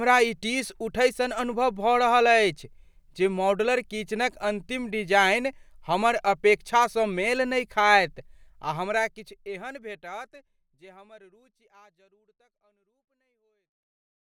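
No technical faults can be heard in the speech, and the fade-out from about 8.5 s to 14.2 s is smooth, with no click or hard edge.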